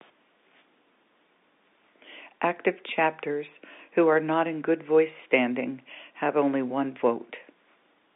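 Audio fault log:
Nothing stood out on listening to this speech recording.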